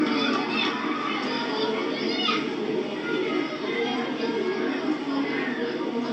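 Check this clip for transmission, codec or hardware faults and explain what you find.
Nothing in this recording of sounds points to a transmission, codec or hardware fault, so there's nothing here to flag.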